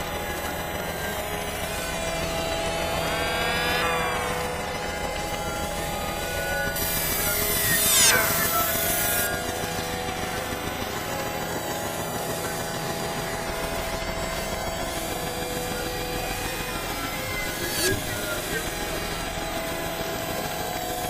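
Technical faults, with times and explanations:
6.76–9.27 s: pre-emphasis left on. A treble boost following the FM 50 µs curve was never undone, lifting 10 kHz about 11 dB above 1 kHz, so the sound turns thin, bright and hissy. A spectrogram shows the upper band brightening sharply across exactly this span.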